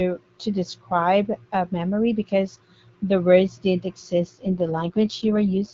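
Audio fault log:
4.22 to 5.74 s, AMR rate drop: right after "because the words didn't" the speech turns rougher and more synthetic through to the end. The codec has been pushed down from 12.65 to 6.6 kbit/s, so there are fewer bits for the voice itself and the bandwidth doesn't change.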